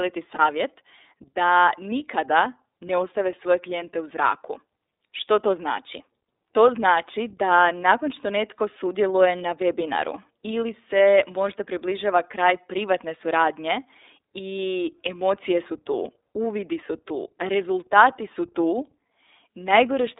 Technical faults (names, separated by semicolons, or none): iLBC codec; lost iLBC frames